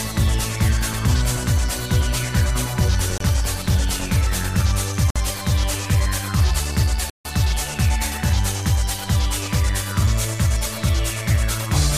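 A likely Bluetooth stall, with the wireless link holding up packets until the headphones' buffer emptied, drops the sound to silence three times: 3.18 to 3.20 s (27 ms), 5.10 to 5.16 s (54 ms), and 7.10 to 7.25 s (153 ms), each gap then resuming abruptly.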